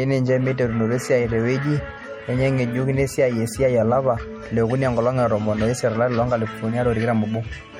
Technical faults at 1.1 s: MP3 compression

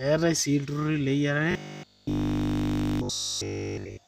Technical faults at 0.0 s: none

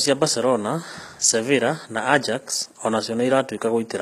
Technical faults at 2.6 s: HE-AAC compression

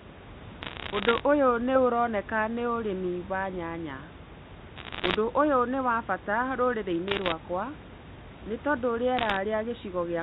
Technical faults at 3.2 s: none

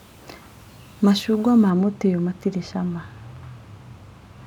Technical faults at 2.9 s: de-emphasis applied wrongly

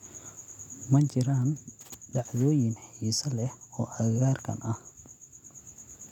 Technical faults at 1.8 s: none

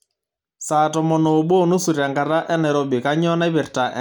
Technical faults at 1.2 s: none

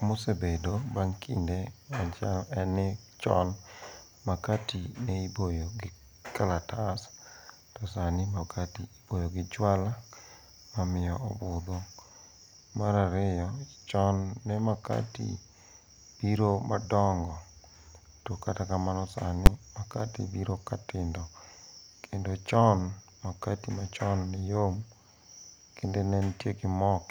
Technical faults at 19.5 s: invalid numbers at full scale

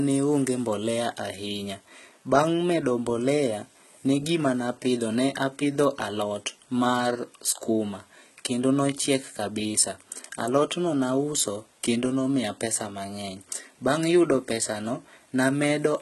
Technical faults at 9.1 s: low-bitrate audio saved at a high bitrate

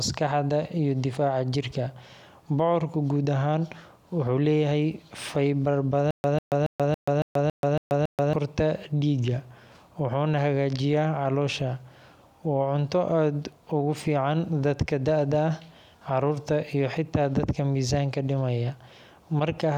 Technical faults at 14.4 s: none

